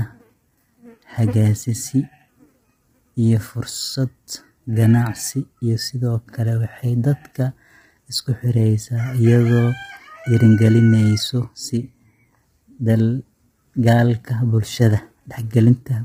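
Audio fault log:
throughout, low-delay AAC compression: likely heavy AAC-ELD coding, fitting 24 kbps; short frames blur harmonics, leaving rough, grainy speech and nothing above 15.7 kHz.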